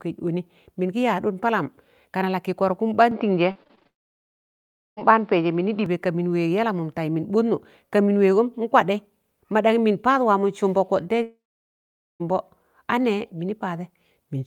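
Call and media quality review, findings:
Dull, boxy speech 3.11–5.86 s, nothing above 5.6 kHz, level shifting by around 5 dB, new background noise roughly 40 dB under the speech, no gap at the change. Input switched to a poorer device, likely a headset call profile with narrowed bandwidth.

Choppy, robotic speech 3.51–3.87 s. Repeated packet loss: about six short holes, longest 37 ms, roughly 140 ms missing, concealment stretching the last sound across 38% of the span. Jitter buffer and loss-concealment path.

Long network dropout 3.87–4.99 s: brief concealment fading out, then near-silence for 1.08 s. About 1.1 s of speech gone, likely lost on the network path. Second long network dropout 11.23–12.22 s: about 0.98 s missing, 0.83 s of it silent, likely the same cause.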